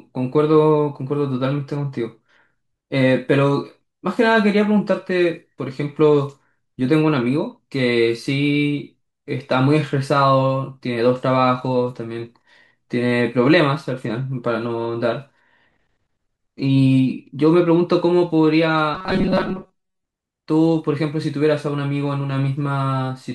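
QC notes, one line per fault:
18.95–20.05 s, robotic sound from repeated short buffers: for about 1.1 s the speech becomes a rigid, metallic buzz fixed at 188 Hz. It still loosely follows the syllables. The likely cause is audio arriving too seldom, so playback keeps looping a tiny fragment while most of the real signal in this stretch is skipped. A fragment of roughly 5.3 ms fits that 188 Hz tone.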